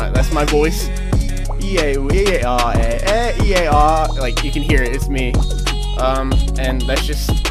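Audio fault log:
Nothing here caught my ear as a fault, so there's nothing to log for this one.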